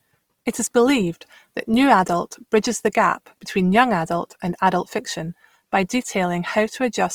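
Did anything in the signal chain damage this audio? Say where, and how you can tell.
Yes. The damage is at the codec stage, and it runs through the whole clip. The speech sounds grainy and rough, with a noisy, fizzy texture where tones should be clean. The top end still reaches about 20.4 kHz, so the band was not cut. The likely cause is Opus compression in its music mode. That mode keeps each band's energy but fills starved bands with folded or noise content. This fits a low bitrate of around 24 kbps.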